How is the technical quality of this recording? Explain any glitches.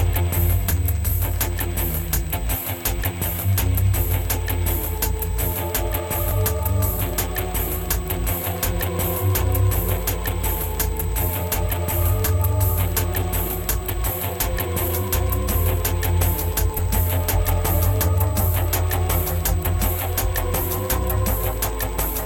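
There is one glitch, at 6.31 s: a sudden jump in the sound, likely a dropped buffer (overrun), where roughly 10 ms was overwritten and the remaining audio was spliced together without any gap.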